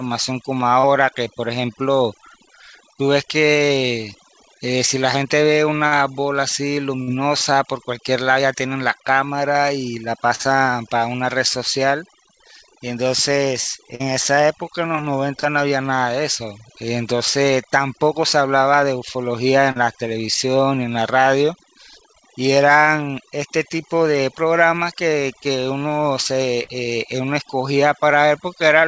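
From start to finish the recording carries overdone noise removal: the suppressor pulled individual frequency bands it mistook for noise far down, taking quiet parts of the voice with them. The speech sits over a near-silent background with twinkling specks. On a spectrogram, that shows as scattered isolated dots and a patchy, hollowed-out voice.

Short concealed packet loss occurs at 0.80, 5.87, 7.03, 10.35, 13.95, 19.72 and 26.63 s. Each time, about 40 ms of audio failed to arrive, and the receiver bridged the gap by extending the preceding sound before blending back in. Each one is heard as a brief smear or wobble. A waveform shows a short, overly regular repeated stretch, and the spectrogram shows a smoothed block of copied harmonics or noise. The call's bandwidth ends sharply at 8 kHz, which fits a G.722 link.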